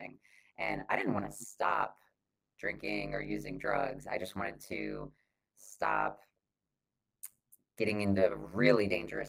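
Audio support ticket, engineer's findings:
Overlap-add ripple, whole clip. Speech level swings about 60 dB around 100 times a second, giving a metallic buzz with extra tones. Probable component: frame-based resynthesis with window overlap not summing to constant gain. Fixed frame-locked rate, unlike pitch-following vocoder roughness.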